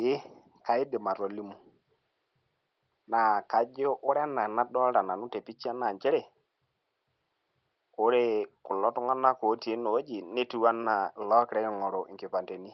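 No faults detected: the room noise sits about 50 dB below the speech, and the content stops at 8 kHz, consistent with the call's microphone processing and an Opus call path at that bandwidth.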